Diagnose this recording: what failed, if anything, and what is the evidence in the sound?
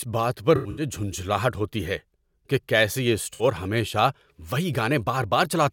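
Smeared, phasey patches break the speech at 0.56 to 0.83 s, between "بات پر" and "جھنجھلاہٹ ہوتی ہے کہ", and at 3.33 to 3.44 s after "ہے کہ کیسے یہ". This is AAC frame loss with concealment at the codec stage. The decoder rebuilt missing frames from the last good spectrum. The first gap sounds like about 149 ms of scattered loss, with the longest run near a tenth of a second. The second gap sounds like about 64 ms.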